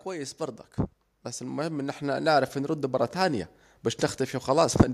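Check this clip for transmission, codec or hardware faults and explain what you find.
There's one fault here: automatic gain rising, from 0.05 s to 3.54 s. The AGC judged the input too quiet and kept raising its gain, by about 9 dB overall, so the speech and the background noise swell up together over those three and a half seconds.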